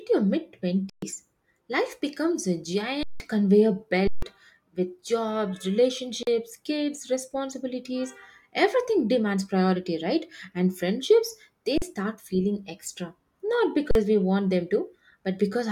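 Speech with six underruns with held sample. The output buffer ran dry and the converter froze at its last value, leaving flat stretches in the waveform at 0.90, 3.03 and 4.07 s (130 to 170 ms each) and at 6.23, 11.78 and 13.91 s (43 ms each, one after "with jobs"). Audio went missing at each: about 150 ms at the long gaps and about 40 ms at the short ones.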